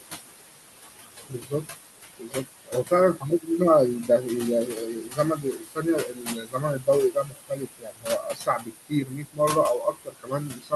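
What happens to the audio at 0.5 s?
At 0.5 s the speech carries noise suppressor artifacts, present throughout the clip. The suppressor cuts bands it judges to be steady noise by about 18 dB. The room noise, only about 8 dB below the speech, sinks between phrases and rises under them.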